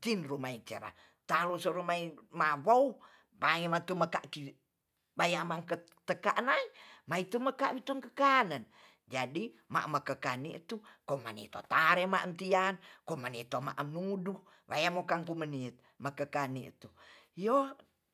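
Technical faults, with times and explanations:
No technical faults can be heard at any point in the speech recording.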